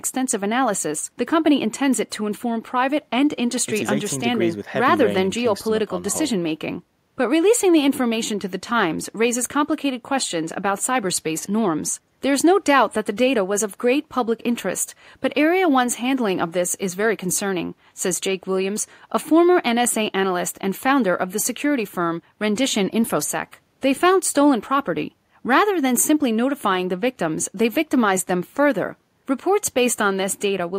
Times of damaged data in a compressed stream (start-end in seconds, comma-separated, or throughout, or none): none